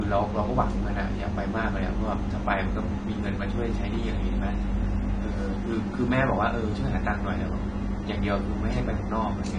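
Low-bitrate audio saved at a high bitrate, throughout the clip: the speech has nothing above 9.5 kHz, a hard ceiling that leaves it dull and slightly muffled, with the artefacts of the earlier encoding still audible. The likely cause is an earlier low-bitrate encode, consistent with AAC at around 32 kbit/s, later re-saved as a high-bitrate MP3. The second encode keeps the damage intact, since it cannot restore what the first one discarded.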